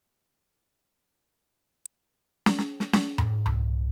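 A short music clip with one electrical switching spike at 1.86 s: a sharp snap peaking around -20 dBFS, most likely a nearby switch or static discharge arcing into the line. Unlike a dropout or buffer glitch, the music continues unbroken beneath it; the snap sits on top.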